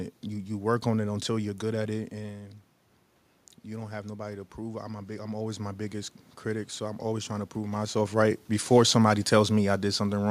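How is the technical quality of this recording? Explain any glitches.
The recording has one technical glitch, an automatic gain rise. From 3.65 to 7.84 s the speech and the room noise behind it swell together, slowly growing louder across those four seconds. The talker moves away around 2 s, dropping the input level by about 10 dB. The automatic gain control reads that as a signal that is too quiet and gradually raises its gain by about 5 dB, lifting the background along with the voice. The talker shifts position again near 7.5 s.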